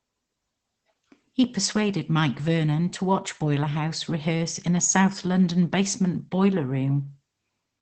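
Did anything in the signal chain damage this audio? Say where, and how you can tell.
Yes, in the codec stage: Opus voice compression damages the whole speech clip. Nothing is present above about 8.8 kHz, and the voice sounds hoarse and slightly robotic, which fits SILK wideband coding at around 12 kbps. A plain low-pass filter would dull the sound without that coarse, buzzy excitation.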